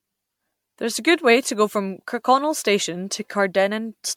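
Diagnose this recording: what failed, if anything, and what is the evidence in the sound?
Codec stage, generation loss: swirly, hollow, smeared speech throughout with blurred attacks, likely from repeated MP3 re-encoding near 96 kbit/s. The spectrogram shows spectral holes and smeared onsets.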